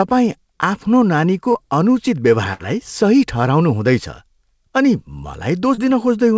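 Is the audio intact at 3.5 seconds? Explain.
Yes, the speech at 3.5 seconds is intact, carried cleanly through the WebRTC call path with its G.722 coding, which leaves nothing above 8 kHz.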